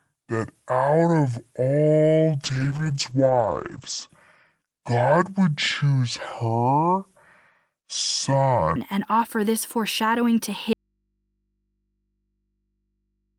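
From 0 to 8.76 s, just before "and offer this foreshadowing", the section at the wrong speed plays at 0.569x, dropping pitch by roughly ten semitones. Likely a clock mismatch; harmonics sit compressed low on a spectrogram. From 2.44 to 4.15 s a call bitrate drop from 32 to 10 kbps, lowest for 1.61 s, cuts bandwidth from 20 kHz to 8 kHz, leaving rough, muffled sound and a flat spectrogram ceiling. After "offer this foreshadowing to", from 10.73 s to the end, an audio dropout to a faint residue leaves only hum about 55 dB down. The waveform collapses abruptly, likely from a lost input.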